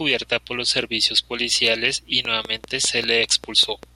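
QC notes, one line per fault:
2.25–3.84 s, train of clicks: after "los servicios policiales y", about ten regular ticks at 5.1 per second, roughly 10 dB above the speech, likely interference; similar vertical spikes on the spectrogram.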